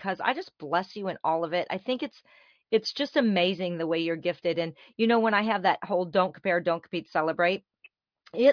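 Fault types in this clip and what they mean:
No fault types are present in this clip.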